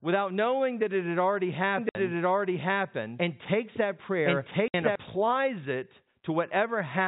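Telephone-band speech, cut off at 4 kHz as G.711 coding does, carries a doubled audio track from 1.78 s to 4.96 s, starting just after "that it had already". A second full-band copy runs about a second behind the original at roughly the same level, with no decay or room colour, and it switches on and off abruptly. The cause is likely a second capture path or an edit holding two out-of-step copies. On a spectrogram the harmonic and formant patterns appear twice, the second set shifted right by about a second, with hard vertical edges where the copy begins and ends. Packet loss filled with silence cuts two 60 ms holes, at 1.89 s (right after "that it had already") and at 4.68 s, each consistent with two 30 ms packets dropped. The waveform falls to a flat line with sheer edges, and the spectrogram shows blank vertical bands spanning the whole 0 to 4 kHz range.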